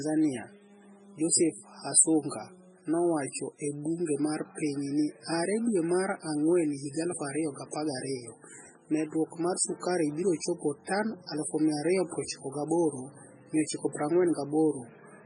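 Throughout, heavy watery swirl and nothing above 10.2 kHz, likely MP3 compression around 16 kbps; unlike plain filtering, weak frequencies flicker frame to frame.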